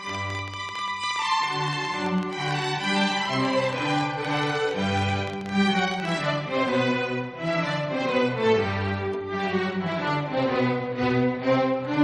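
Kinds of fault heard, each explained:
Train of clicks: a run of about 70 short, similar pulses, roughly 11.7 per second at uneven spacing, ticking over the sound from 0.09 to 6.17 s, peaking about 10 dB above it. Likely from interference or a faulty connection. Waveform shows repeated spikes; spectrogram, thin vertical broadband lines.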